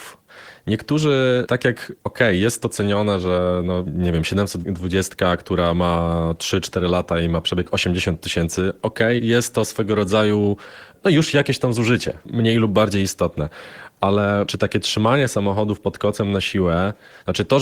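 The recording carries no audible technical fault anywhere in the signal.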